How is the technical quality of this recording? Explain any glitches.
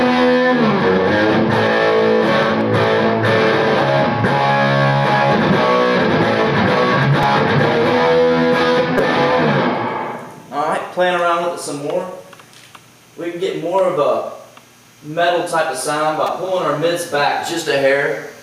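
The recording has two kinds of fault: level pumping throughout and three short stutters.

Gain pumping runs through the whole clip. The level ducks by roughly 10 dB under each loud sound. The likely cause is gain set far too high, with a fast limiter clamping down on every peak.

Repeated buffers occur at 7.23 s, 8.98 s, and from 16.27 to 16.29 s. Each time, fresh audio came late, so the last short block was replayed. The block length fits a buffer of about 5 ms. The first repeats once. The second repeats twice. The third repeats four times.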